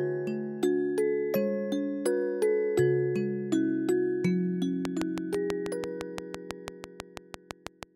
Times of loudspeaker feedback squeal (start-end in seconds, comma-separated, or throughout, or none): none